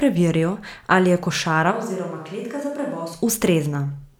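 Speech recording with a switch to a distant microphone from 1.73 s, just after "ali je", until 3.12 s. Over that stretch the voice abruptly becomes roomy and hollow, loses low end, drops roughly 10 dB in level, and picks up room noise sitting around 35 dB below the speech. The sudden change in both directions likely means the close microphone dropped out and a more distant pickup, such as a camera microphone, filled in.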